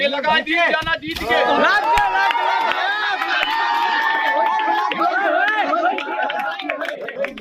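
From 6.94 to 7.16 s there are frames out of order. Two adjacent runs of coded audio were delivered swapped and decoded in that order, so this stretch plays with its two halves exchanged, each about 104.5 ms long, which fits runs of four frames. The sound turns into a brief garbled flutter. Nothing is dropped, and the timing after the fault stays intact.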